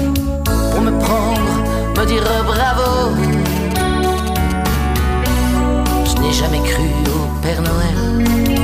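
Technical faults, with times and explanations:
3.24–4.99 s, GSM signalling bursts: a galloping dit-dit-dit of short buzzes at a 216.7 Hz repeat rate, roughly 15 dB below the sound. A nearby 2G phone exchanging brief control bursts couples radio energy into the audio circuit, which rectifies it into clicks. Mains hum is a steady 50 or 60 Hz tone, and an active call gives an unbroken 217 Hz buzz. Here the sound comes in stuttering clusters that start and stop.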